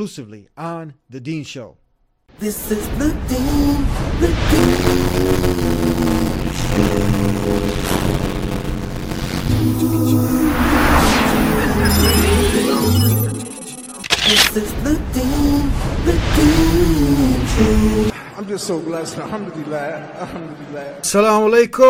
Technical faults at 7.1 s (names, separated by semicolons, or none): block size mismatch (padded)